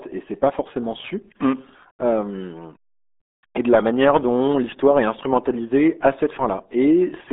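From start to finish the speech sounds muffled, boxed-in and gargly, with a watery, smeared texture on every syllable and no air or sibilant sparkle. That is the RealAudio 14.4 codec: the signal is squeezed into a narrow band of roughly 250 Hz to 3.6 kHz, with nothing above 3.8 kHz. The heavy coding damage points to a very low bitrate, which fits the 8 kbit/s dial-up speech codec.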